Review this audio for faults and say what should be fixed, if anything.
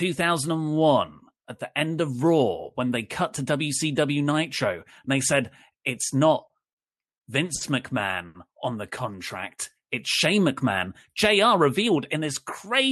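Repeated stalls (stutter) run from 6.48 to 7.63 s, starting just after "they said it's not." Packets on this Opus call path, band-limited to about 12 kHz, reached the receiver late or more slowly than playback consumed them, so the jitter buffer emptied four times. Each time the receiver extended the last sound to cover the gap, about 140 ms in total, the longest 60 ms, roughly 12% of that stretch. Nothing is lost, but the speech drags and stutters. A larger or more adaptive jitter buffer target, sized for this network's delay spread, would prevent these repeated underruns.

A short stall from a late packet falls at 8.27 to 8.37 s, right before "on the." One packet missed its playout deadline because network delay jumped by 80 ms, leaving the jitter buffer empty. The receiver held the preceding sound for about 80 ms until the packet arrived, then resumed from the same point, so a sound is held too long with a slight buzz or dip but no content is missing. 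Smoothing delay on the network path, or letting the buffer grow ahead of such jumps, would prevent this.

A jitter buffer speed-up runs from 11.29 to 12.81 s. Audio had piled up in the jitter buffer beyond its target, and the receiver cut the excess delay by removing short pitch-period slices again and again, about 70 ms overall. Playback runs at about 104% of normal speed with the pitch unchanged. Draining the excess more gradually, or preventing packet bunching upstream, would avoid the speed-up.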